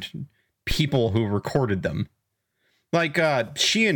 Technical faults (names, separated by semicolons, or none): phantom power thump